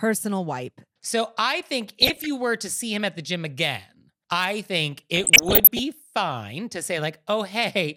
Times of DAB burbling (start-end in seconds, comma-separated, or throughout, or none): 2.02-2.26, 4.97-5.79